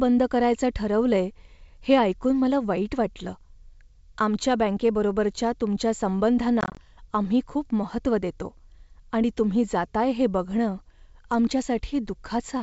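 Between 6.61 and 6.79 s the speech breaks up with packet loss on an ADPCM call: about 90 ms of audio goes missing in short holes spread over roughly 160 ms, none longer than 20 ms, which points to around ten lost packets. Each gap is hard-edged silence, and because the decoder's predictor and step size drift from the sender's, the speech resumes slightly distorted before resettling. The surrounding wideband sound is consistent with full-rate G.722.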